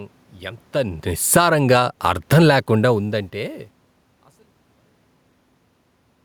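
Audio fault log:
1.21–1.62 s automatic gain falling: gain control judged the input too loud or its background noise too strong and lowered it by about 11 dB, so speech and background sink together.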